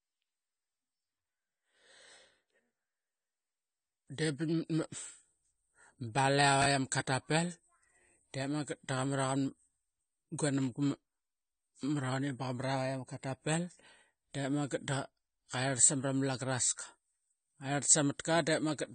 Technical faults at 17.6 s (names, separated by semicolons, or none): AAC compression